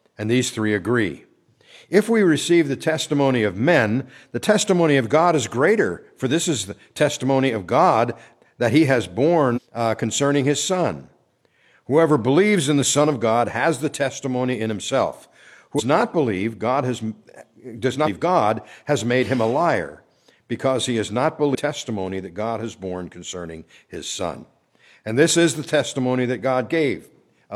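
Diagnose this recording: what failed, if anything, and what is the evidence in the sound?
Damaged data in a compressed stream, heard as four short disturbances at 9.52–9.59 s, 15.75–15.82 s, 18.02–18.08 s and 21.51–21.55 s, each lasting 48 to 70 ms. The failure sits at the codec stage. Corrupted bytes in the encoded stream make the decoder misread those frames. It then loses sync and hunts for the next valid frame header, briefly disrupting the sound before normal decoding resumes.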